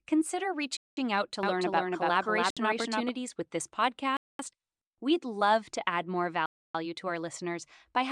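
At 0.77 s the speech drops to dead silence for about 200 ms, resuming at 0.97 s. This is a Bluetooth stall, likely caused by radio interference delaying packets until the headphone buffer emptied and playback paused for retransmission. Similar gaps follow at 2.50 s (about 60 ms), 4.17 s (about 220 ms) and 6.46 s (about 290 ms, ending at 6.75 s). Each is a clean cut to silence with no fade.

From 1.43 s to 3.09 s a doubled audio track is present. A second full-band copy of the speech trails the original by roughly 300 ms, sitting around 5 dB lower. It has no reverberant tail or room colouring, and it switches on and off abruptly at both ends. The likely cause is the same signal reaching the mix twice, once through a slower capture path or through overlapping edited copies. The 2.50 s stall falls within this doubled stretch.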